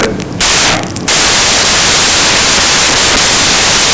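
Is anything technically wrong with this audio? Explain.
Yes. Throughout the speech, the samples are built from the wrong bytes: the reader assembles each sample misaligned or in swapped byte order, so the rapidly changing low bits land in the top of every value. The result is loud, harsh noise, close to white on the louder sounds.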